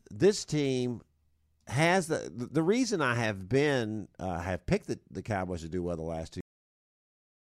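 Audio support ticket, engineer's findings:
Cut-off end at 6.41 s, right after "well the last two". Speech stops mid-sound and drops straight to digital silence, no decay, dead through to the end. Looks like the final buffers never got written out, so the recorder or encoder probably didn't flush on stop.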